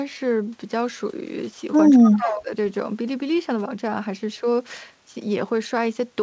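From 1.97 to 2.51 s the speech dips sharply, by around 20 dB at its deepest, thinning and partly dropping out for about half a second. This is speech suppressed in double talk, likely because the echo canceller could not separate the talker from loudspeaker echo while both sides spoke, and turned everything down.

Inside that dip, from 2.07 to 2.42 s, a faint delayed copy of the speech trails the original by 225 ms, sitting about 15 dB below it. This is an echo leak, likely from a loudspeaker whose pickup the far-end echo canceller failed to fully remove, so the residue was sent back.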